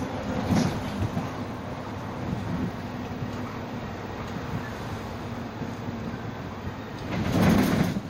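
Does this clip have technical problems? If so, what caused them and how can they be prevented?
No technical faults are audible.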